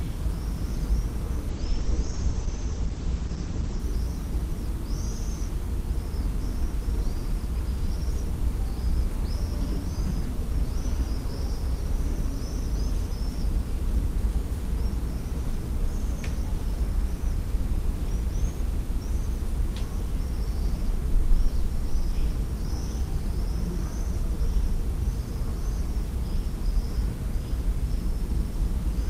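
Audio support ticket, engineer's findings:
Audio turns rough and muffled, 1.5–3.85 s, highs gone above about 8 kHz for roughly 2.3 s. Call bitrate drop: bandwidth estimate fell, encoder coded far more coarsely and narrowed bandwidth, consistent with a drop from around 48 to 11 kbps, then recovered.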